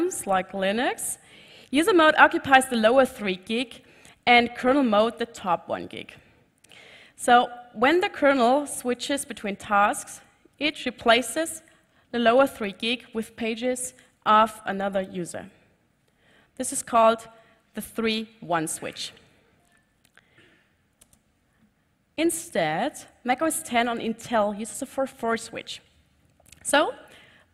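No technical faults can be heard anywhere in the audio.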